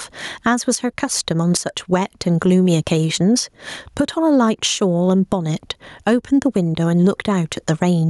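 Gain pumping runs through the whole speech clip. The level swings by roughly 15 dB. Loud and soft passages sit close together, and the speech sounds squashed. The likely cause is gain set far too high, with a fast limiter pulling it back down.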